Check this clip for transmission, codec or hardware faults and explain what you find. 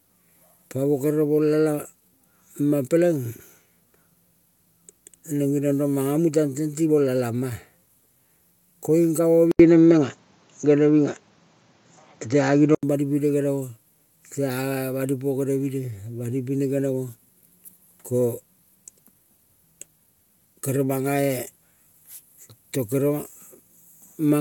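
One fault stands out in this speech clip. An input switched to a poorer device from 9.51 to 12.83 s: the recording likely moved to a narrower-band microphone, cutting everything above 7 kHz. After an 80 ms gap the sound turns dull just before "bani pine", shifts about 5 dB in level, and picks up a new noise floor, before clearing again.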